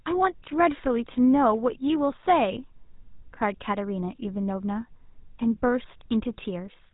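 Speech run through a GSM full-rate codec for the whole clip. There's a plainly audible buzzy, gravelly roughness from the pulse-driven excitation, with nothing above 3.8 kHz left, which fits the old 13 kbps mobile standard.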